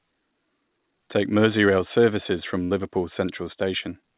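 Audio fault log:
2.64–2.72 s, burst of packet loss: straight after "services from", about 60 ms of speech drops out. The receiver fills the gap by extending the last sound for roughly 63 ms and fading it down, which gives a brief held continuation of that sound before speech resumes further along with that stretch missing. The concealment carries the same narrowband character as the surrounding call audio, with nothing above 4 kHz, which fits a G.711 telephone-grade path.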